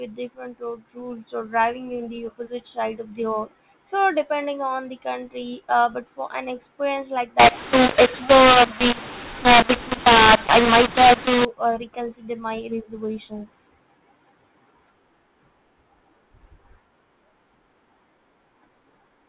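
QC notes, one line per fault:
7.40 to 11.45 s, mu-law and A-law mixed up: for about four seconds this speech, carried as G.711 mu-law telephone audio, is decoded as if it were A-law. Because the two logarithmic scales map the 8-bit codes to different levels, amplitudes come out scrambled, some too loud and some too soft, so the speech turns harsh and distorted, and near-silent samples are pushed well above zero, filling the gaps between syllables with noise.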